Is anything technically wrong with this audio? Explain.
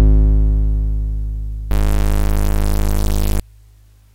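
Yes. From 1.70 to 3.40 s the music turns harsh and buzzy. The likely cause is a stuck bit, offsetting samples by around -10 dBFS.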